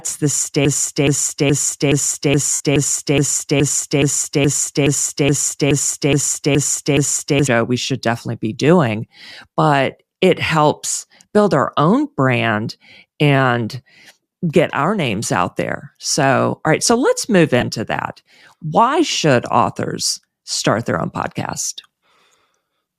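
Speech clip with two kinds of fault. From 0.65 s to 7.47 s a broken-record loop takes over: a 0.42 s fragment repeats exactly, back to back, 16 times, and normal speech resumes only at "we should definitely be". The content that belonged in that span never plays. The likely cause is a stalled player, encoder or stream that kept re-sending the last block it held. Lost LE Audio frames occur twice. The first, from 2.53 s to 2.61 s, falls inside the loop and lasts 67.5 ms, which points to a run of several consecutive frames. Across it the LC3 decoder's concealment reuses the last spectrum with randomised signs, so tonal content smears into noise and fades toward silence. The second, at 17.61 s, is a 15 ms gap between "right so let's move" and "that why should authors", heard as a brief noisy blur.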